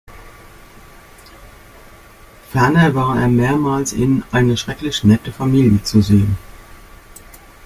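Speech recording, and there's honestly nothing technically wrong to flag anywhere in it.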